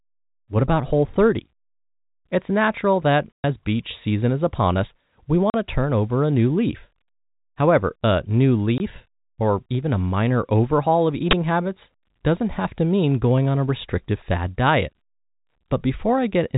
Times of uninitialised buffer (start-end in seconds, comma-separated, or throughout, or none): 11.31